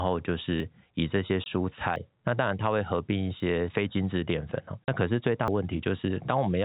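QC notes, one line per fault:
0.6, 1.96, 3.4 and 5.48 s, dropped buffer (overrun): each time the sound lurches forward with no gap at all, as if a sliver was snipped out. Roughly 40 ms goes missing at the first three points, and nearer a tenth of a second at 5.48 s. The likely cause is the capture side falling behind, so the hardware overwrote samples before they were read and the surviving audio was spliced straight together.
1.44 to 1.46 s and 4.84 to 4.88 s, packet loss filled with silence: the speech drops into a brief dead hole, bounded by hard edges. The first hole lasts 20 ms and the second 40 ms, exactly one and two units of a 20 ms packet. When packets failed to arrive, the receiver inserted pure silence rather than concealing the gap, so the speech is cut off and resumes abruptly.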